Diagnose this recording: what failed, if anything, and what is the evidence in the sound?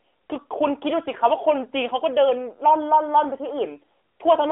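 Nothing in the recording has failed: the speech arrives over an AMR narrowband mobile codec link at 12.2 kbps, confined to the 300 to 3400 Hz telephone band with nothing above 3.5 kHz and only the light coding texture expected at that bitrate.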